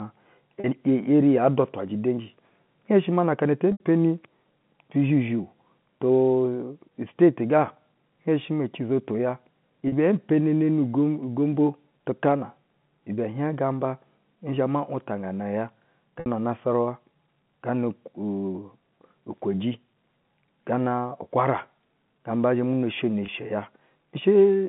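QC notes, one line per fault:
0.60–0.64 s, 3.72–3.80 s, 9.88–9.92 s, 16.20–16.26 s, 23.26–23.28 s: packet loss with pitch repetition. Gaps of 40, 80, 40, 60 and 20 ms, which fits 20 ms packets, are each filled by repeating the last pitch period. The sound briefly holds with a buzzy tone in the 150 Hz to 3.5 kHz telephone band.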